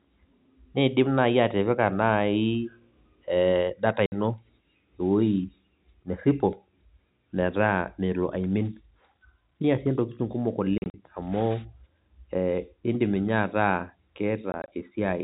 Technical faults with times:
4.06-4.12 packet loss filled with silence
10.78-10.94 packet loss filled with silence
14.52-14.68 packet loss filled with silence

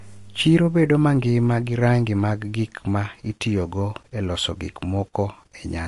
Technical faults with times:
0.00-5.87 MP3 compression

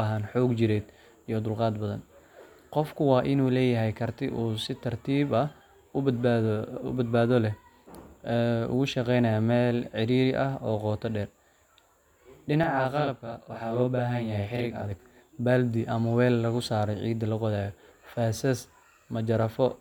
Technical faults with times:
12.63-14.91 channel delay (doubling)

